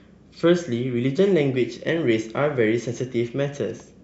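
Speech, with no technical faults heard anywhere in the clip.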